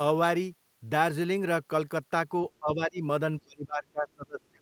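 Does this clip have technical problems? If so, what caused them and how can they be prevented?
Yes. The speech dips sharply from 2.6 to 3.03 s and almost vanishes from 3.43 s to the end, likely speech suppressed in double talk, where the echo canceller mistook this side's speech, overlapping the far-end sound, for echo. Better echo-path modelling, a tuned double-talk detector, or headsets would prevent it.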